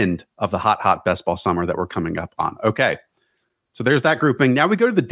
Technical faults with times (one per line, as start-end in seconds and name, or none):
none